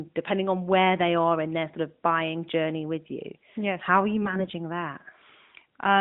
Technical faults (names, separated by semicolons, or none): AMR bit errors